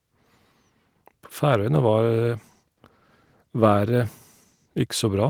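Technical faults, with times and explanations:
No faults found in the speech; the Opus voice compression holds full bandwidth in hybrid mode with only light coding damage, consistent with a rate around 20 kbps.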